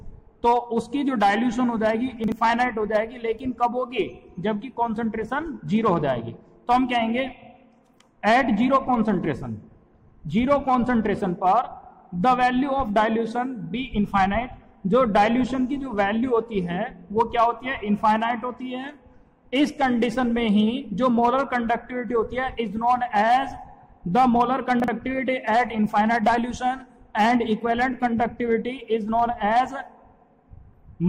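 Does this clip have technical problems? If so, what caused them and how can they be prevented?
Yes, chunks out of order at 2.24–2.32 s and 24.8–24.88 s: a 40 ms chunk lands one slot late, jumbling that moment at the hard joins. Reorder chunks by sequence number before playback or writing.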